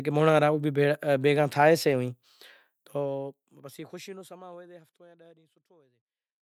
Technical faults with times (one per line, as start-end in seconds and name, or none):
none